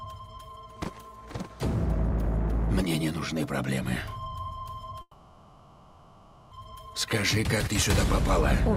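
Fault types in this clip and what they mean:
call audio freeze: From 5.01 to 6.53 s the sound stops moving forward, and the last fragment is drawn out into a buzzing or hissing, fading tail that fills about 1.5 s, with only a brief silent stretch of around 40 ms. The audio then resumes exactly where it stopped, with nothing skipped, so everything after it runs about 1.5 s late. The likely cause is packets stalled in transit, which emptied the receiver's jitter buffer while concealment filled the wait.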